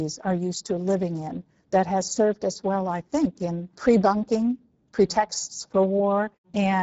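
Speech throughout the clip sounds noisy and hoarse, with a plainly audible grainy, buzzy texture on every phrase and nothing above about 7.7 kHz. This is Speex codec damage. Speex is a CELP speech coder: it models the vocal tract and spends its few remaining bits on the excitation signal, so a low setting leaves the excitation crudely coded and the voice roughened. The degradation points to a bitrate near 10 kbit/s.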